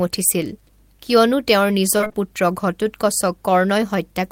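Repeated packet loss (robotic sound) runs from 1.97 to 2.16 s, just after "উঠিছিল কিয়নো তেওঁৰ". Five separate gaps fall inside this 0.18 s stretch, none longer than 22 ms. Each hole is papered over by stretching out the last received sound, and about 46% of the span ends up as that patch-in audio. Because the gaps arrive in quick succession, the speech turns choppy, with fragments missing.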